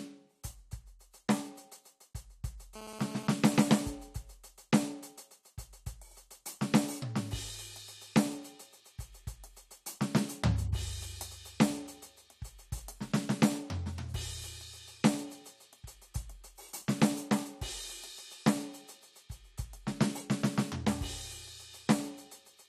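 A music clip with GSM phone buzz from 2.76 to 3.57 s. It is a hard, raspy 217 Hz tone with many harmonics, about 13 dB below the music. The audio circuitry rectified the transmit bursts of a nearby 2G phone, and the short burst fits a data transfer rather than a call.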